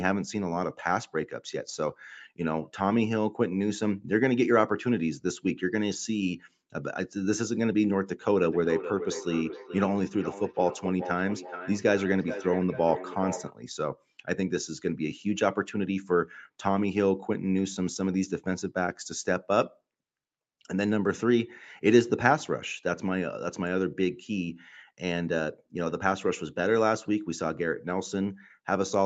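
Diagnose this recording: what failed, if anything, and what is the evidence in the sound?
Between 8.42 and 13.55 s the speech comes back in discrete copies roughly every 0.4 s, peaking about 10 dB below the direct sound. This is feedback echo between two devices. A second device's loudspeaker refeeds this microphone, beyond its own echo canceller, so unlike room reverb the repeats are evenly spaced.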